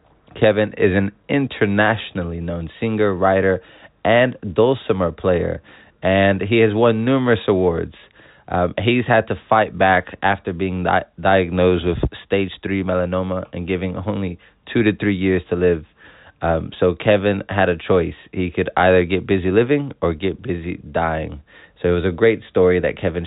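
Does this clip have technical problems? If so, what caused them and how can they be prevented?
No, there's nothing wrong here to track down or guard against, so you can relax about this one.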